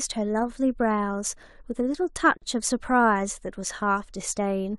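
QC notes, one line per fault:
2.37 to 2.42 s, gap at a join of encoded pieces: a silence of about 44 ms cuts into continuous speech, then the sound resumes exactly where it stopped. The edges are smeared by the codec. Two separately encoded pieces meet here, joined without trimming. The first piece's padded last frame and the second's start-up delay both remain, leaving a short hole of nothing at the seam.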